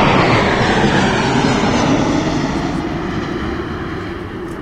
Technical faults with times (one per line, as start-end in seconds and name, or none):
0.00-2.00 adaptive stream starting at a low bitrate